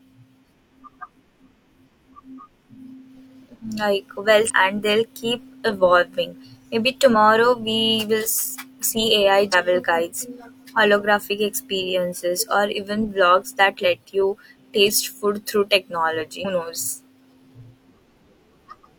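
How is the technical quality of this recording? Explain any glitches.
The recording has five short glitches from damaged data in a compressed stream, heard in this speech at 4.46–4.51 s, 7.10–7.14 s, 9.49–9.55 s, 13.80–13.86 s and 16.41–16.46 s. Each lasts about 40 to 50 ms. At those points corrupted bytes make the decoder misread its frames and lose sync until it finds the next valid header. The result is a brief chirp or squawk. On a spectrogram each shows as a narrow vertical smear of broadband energy, and on the waveform as a sudden discontinuity.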